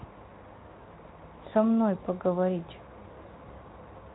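At 3.05 s the speech jumps forward by a sliver of sound, roughly 10 ms, with no gap of silence in between. The likely cause is a dropped buffer (overrun): the software failed to collect a block of samples before the audio hardware wrote over it, so that piece was lost and the audio on either side was spliced directly together. The Speex coding runs underneath it, adding light coding damage and leaving nothing above 3.8 kHz.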